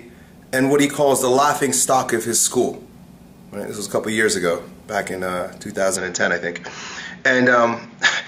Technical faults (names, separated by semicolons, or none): input switched to a poorer device